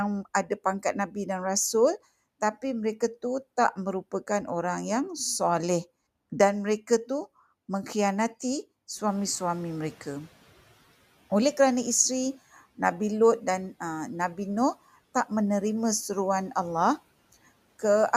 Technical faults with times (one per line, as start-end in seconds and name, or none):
0.83-1.16 speech cut by the noise suppressor
9.07-10.31 noise suppressor catching up